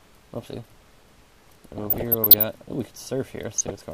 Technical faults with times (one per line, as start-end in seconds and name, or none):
1.78-2.43 DAB burbling
3.56-3.80 DAB burbling